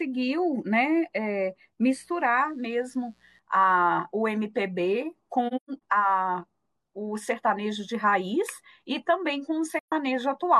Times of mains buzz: 1.90-3.40

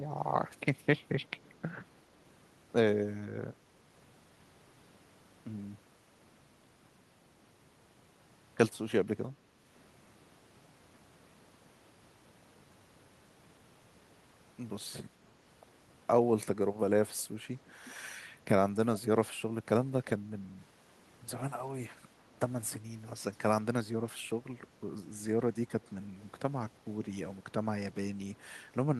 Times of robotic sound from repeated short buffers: none

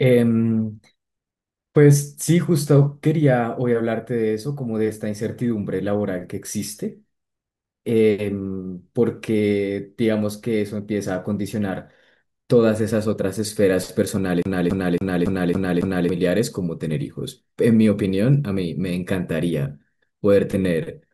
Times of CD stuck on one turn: 14.42-16.09

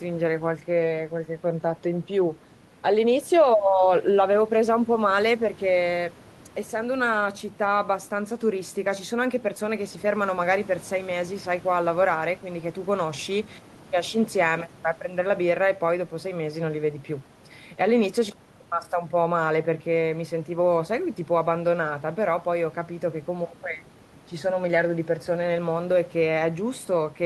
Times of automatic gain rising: none

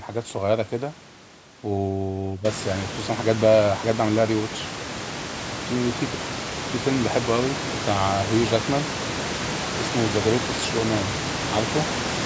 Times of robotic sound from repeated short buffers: none

